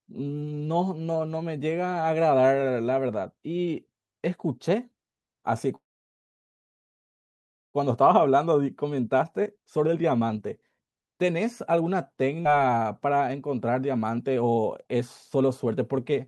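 Speech coming through a call path, where the top end stops around 12 kHz, consistent with Opus at about 64 kbps. At 5.75 s there's a call audio freeze lasting to 7.77 s: a quick tail of the last sound, then nearly 2 s of silence before the talker picks up exactly where they left off. Nothing's lost, it's just pushed later, and the likely cause is packets stalling so the jitter buffer ran dry. Right after, from 8.03 to 11.81 s, you get a jitter buffer speed-up: the receiver snips tiny pitch-period chunks to burn off that built-up delay, so the speech runs about 15% fast at normal pitch and sounds rushed, shedding roughly half a second. Then at 12.43 to 12.48 s there's a skip ahead, an almost seamless jump that drops roughly 200 ms of speech, joined nearly straight across. A second speed-up follows from 13.06 to 16.13 s, gentler at about 10% faster, trimming roughly 0.3 s.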